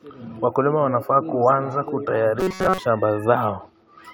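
A speech clip in which, from 2.41 to 2.79 s, just after "wanafaa kuanza na", the sound turns into a rigid metallic buzz at 188 Hz. This is robotic sound from repeated short buffers, likely caused by audio arriving too seldom, with a snippet of about 5.3 ms replayed in place of most of the real audio. Unlike codec warble, the buzz stays at one fixed rate while only the loose shape of the syllables survives.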